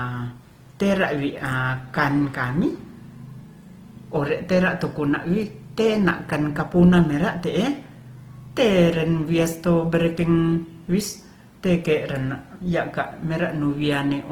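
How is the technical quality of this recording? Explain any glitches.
The recording's technical quality is limited by one fault that runs through the whole clip.

Opus compression, throughout: the speech was likely encoded with Opus in its CELT music mode, at a rate that fits about 16 kbps. Lacking bits, the encoder fills bands with folded or noise content, so the speech sounds plainly grainy and rough, though the bandwidth still reaches about 20.2 kHz.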